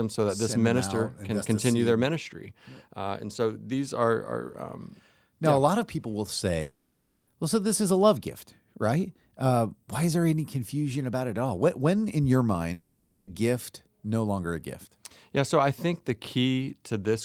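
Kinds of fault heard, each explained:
Long network dropout: Twice the speech breaks off and is replaced by a synthetic continuation of the last sound, a smeared buzz or hiss, from 6.61 to 7.30 s, after "lot of people will", and from 12.73 to 13.30 s, after "when in your". The fill runs for the whole gap with no silence, and speech resumes at "well so this is" with that span missing. This is likely lost network audio masked by the receiver's concealment.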